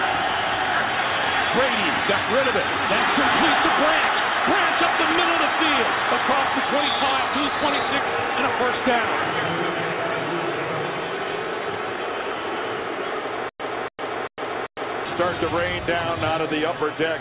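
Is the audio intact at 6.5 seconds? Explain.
Yes, the audio is intact at 6.5 seconds, with no fault at that moment beyond the narrow telephone-style band of the call path, which carries nothing above 4 kHz.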